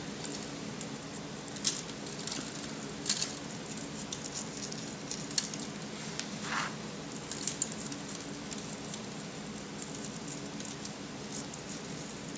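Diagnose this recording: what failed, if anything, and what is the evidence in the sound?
Nothing in the recording stood out as a fault on a careful listen.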